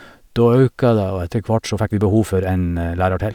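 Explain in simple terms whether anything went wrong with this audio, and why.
From about 1.51 seconds to the end of the clip, the speech suddenly hurries along at roughly 1.6 times its earlier pace, sounding rushed, yet the pitch of the voice stays where it was. That combination is the mark of a time-stretched section. This was likely done by software squeezing the audio to fit a shorter length, cutting out many tiny slices so the timing shrinks without raising the pitch.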